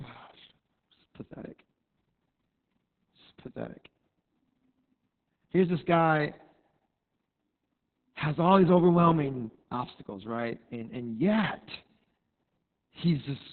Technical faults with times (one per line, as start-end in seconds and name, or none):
0.00-13.52 Opus voice compression